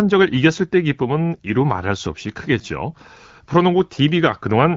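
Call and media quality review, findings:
Nothing stood out on listening to this speech clip.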